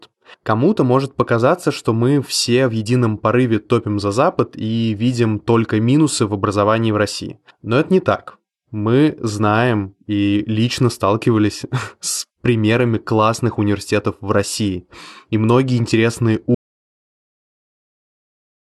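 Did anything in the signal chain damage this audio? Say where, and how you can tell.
Yes: an audio dropout to silence at 16.55 s, just after "многие интересные", lasting to the end at 18.73 s. The speech stops mid-flow into silence with no room tone, so the input feed was lost, likely a disconnected device or broken link, while recording continued.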